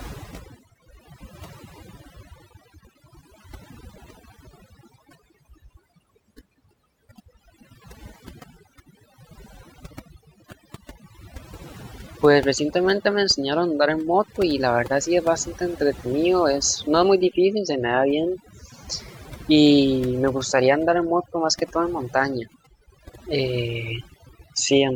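Throughout the clip, a noise reduction stage set far too aggressively strips out frequency bands it mistakes for noise, dragging the softer parts of the speech down with them. The result is overdone noise removal: near-silent gaps sprinkled with twinkling, warbling specks.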